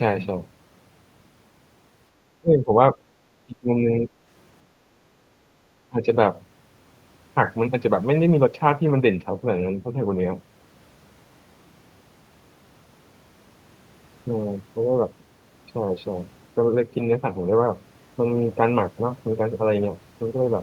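From 2.41 to 2.77 s, 3.46 to 4.1 s and 5.89 to 6.06 s the speech dips sharply, by up to roughly 25 dB. This is speech suppressed in double talk, likely an echo canceller turning down the near talker. Waveform and spectrogram show the level dips.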